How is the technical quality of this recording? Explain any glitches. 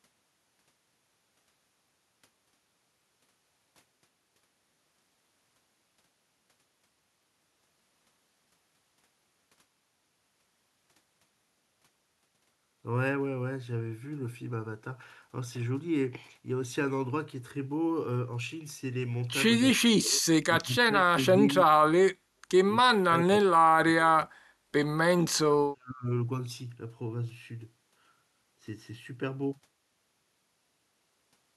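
The quality's let down by a run of dropouts in the second half. Speech suppressed in double talk hits at 19.74–20.26 s, 20.60–21.48 s, 21.65–21.82 s, 22.82–24.21 s and 25.16–26.06 s. The talker's level collapses by roughly 35 to 40 dB in chopped bursts, most likely an echo canceller clamping down while both sides spoke at once.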